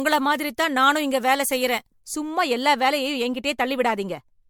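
A speech clip with two faults. Throughout, the sound is swirly, smeared and hollow, and attacks blur. This is likely generation loss: repeated MP3 decoding and re-encoding, about four passes, with a result that fits 96 kbit/s. Each pass adds fresh quantisation noise and spectral holes. From 0.0 to 2.0 s, just before "சும்மா எல்லா வேலையும்", pre-emphasis is left on. Treble sits about 8 dB high at 10 kHz relative to 1 kHz, which fits the CD 50/15 µs curve without its matching de-emphasis. The sound is thin, bright and sibilant.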